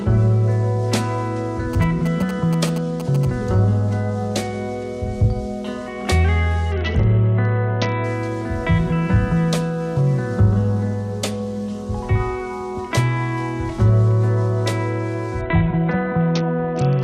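From 1.73 to 3.25 s, GSM signalling bursts from a nearby 2G phone are rectified by the audio circuit, producing galloping ticks and 217 Hz buzz roughly 15 dB below the audio.

A Bluetooth SBC bit pool drop occurs at 6.72 to 8.04 s and again from 15.41 s to the end. Starved high sub-bands dull the treble while coarse quantisation adds grit. This fits a bit pool cut from 28 to 7, around 66 kbps.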